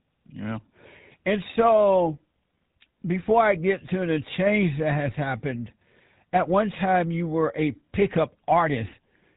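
From start to finish the speech carries the coarse, buzzy texture of the GSM full-rate codec, with damage that is plainly audible and a character that fits its 13 kbit/s rate. The codec rebuilds the voice from a vocal-tract filter excited by regularly spaced pulses, discarding two of every three excitation samples. That sparse excitation gives the gravelly roughness, and nothing survives above 4 kHz, so sibilants and upper harmonics are missing throughout.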